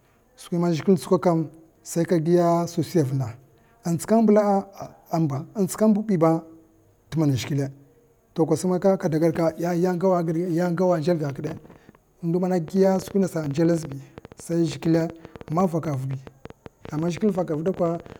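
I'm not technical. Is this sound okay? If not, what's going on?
No. From 12.68 s to 18.17 s there is a train of clicks over the speech, about 12.6 per second at an uneven pace. That makes roughly seventy similar ticks, heard in the pauses too. The likely cause is electrical interference or a faulty connection or power supply.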